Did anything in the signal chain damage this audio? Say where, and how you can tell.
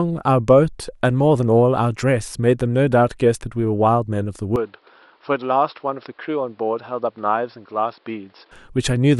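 Yes. From 4.56 s to 8.51 s the speech abruptly turns duller and boxier, with nothing above 5.5 kHz, a level drop of about 5 dB, and a new background noise about 35 dB under the voice. The full sound returns at 8.51 s, with no gap at either switch. This is likely an input switched to a poorer device at the driver level. Unlike a codec low-pass, bandwidth, level and noise floor all change together at one instant.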